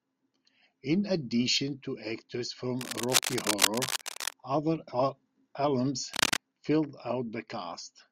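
A worn cable or connector was likely being disturbed, its contact resistance jumping about and adding irregular bursts of noise to the speech. This cable scratch noise first runs from 2.79 to 4.33 s as a dense rustling scrape roughly as loud as the speech itself. It returns more briefly from 6.13 to 6.37 s, this time somewhat louder than the speech, a sharp scratching flurry sitting on top of it.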